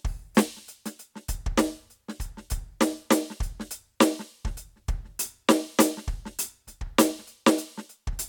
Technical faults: none

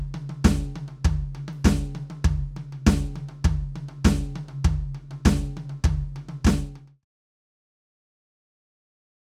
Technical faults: none

